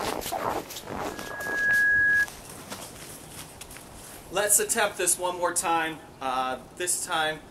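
A microphone caught its own loudspeaker from 1.10 to 2.27 s, causing loudspeaker feedback squeal: a 1.7 kHz tone swelling within a second to about 10 dB above the sound.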